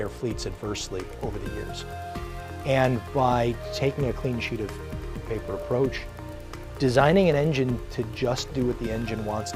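From 0.54 s to 9.02 s, a short click recurs every 1.7 s, about seven in all, while sound is present. This is likely clock drift buffer slips: two clocks differing by roughly 200 ppm, each slip dropping or repeating some 15 samples.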